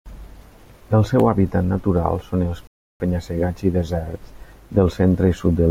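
At 2.67 s, right after "hàbitat natural són els", the speech cuts to silence and stays there until 3.00 s. That is a rebuffering stall: playback drained its downloaded audio and halted until more data arrived. When the sound returns it picks up at the exact point where it stopped, so nothing is skipped or repeated, but the gap inserts about 330 ms of dead air into the middle of the phrase.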